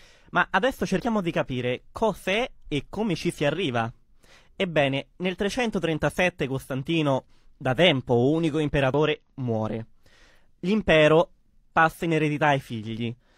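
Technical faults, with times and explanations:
0.96 to 1.00 s and 8.94 s, damaged data in a compressed stream: corrupted bytes in the encoded speech make the decoder misread those frames and resynchronise on the next valid header, giving a brief blip just before "di capire cos'è e" and again right after "da tempo unico".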